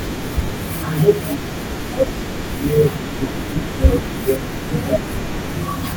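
At 0.45 s, lasting about 30 ms until 0.48 s, lost LE Audio frames interrupt the speech. The 30 ms gap fits three 10 ms LC3 frames. The decoder covered the gap by repeating the last received spectrum with random signs, so the sound blurs into a brief noisy smear. On a spectrogram, harmonic lines give way to a diffuse, grainy patch. The waveform shows irregular, noise-like samples, and then the normal signal resumes. The light lossy compression underneath leaves only slight damage.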